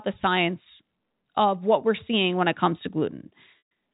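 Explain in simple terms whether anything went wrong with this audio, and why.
At 3.58 to 3.7 s the speech briefly holds one buzzy sound that fades away: packet loss with pitch repetition, where about 130 ms of audio went missing and was patched over.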